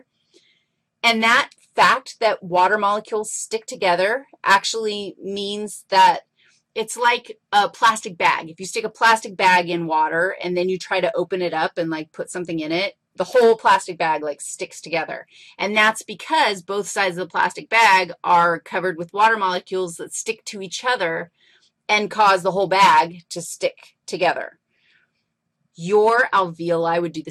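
No technical fault can be heard anywhere in this audio. There is nothing here that calls for a time or a cause.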